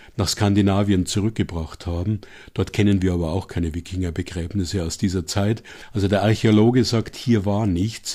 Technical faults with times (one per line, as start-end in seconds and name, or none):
none